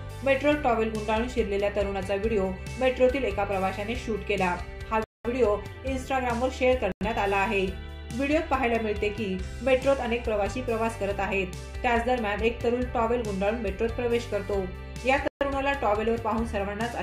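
The audio drops to dead silence three times, at 5.04 to 5.25 s (about 206 ms), 6.92 to 7.01 s (92 ms) and 15.28 to 15.41 s (132 ms), then carries on. These gaps are likely Bluetooth stalls, where delayed packets let the headphone buffer run empty.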